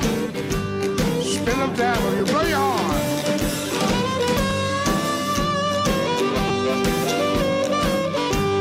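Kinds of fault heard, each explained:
lost LE Audio frames: brief noisy smears at 2.19 s and 4.50 s, each about 10 ms, and from 6.48 to 6.50 s. The lengths fit single and paired 10 ms LC3 frames dropped over Bluetooth, filled by replaying the previous spectrum with scrambled signs.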